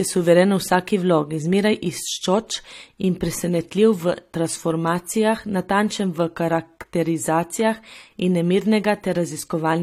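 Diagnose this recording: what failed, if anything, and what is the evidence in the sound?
Codec stage, throughout the speech. Two layers of compression artefacts are heard, and nothing exists above 15.2 kHz. Likely transcoding between lossy codecs, fitting HE-AAC re-encoded as AAC-LC.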